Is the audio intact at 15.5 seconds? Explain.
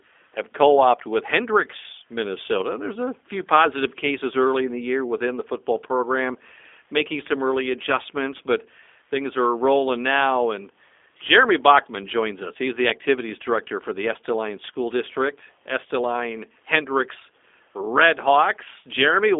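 No. At 15.5 s, as throughout the clip, the speech carries G.729 codec damage. Instead of storing the waveform, the codec rebuilds each 10 ms frame from a vocal tract filter, a pitch predictor and a few pulses, which fits an 8 kbit/s link. The sound is confined to roughly 250 Hz to 3.6 kHz, with nothing above 3.7 kHz, and has a plainly audible rough, synthetic edge. A simply band-limited phone line would sound narrow but clean.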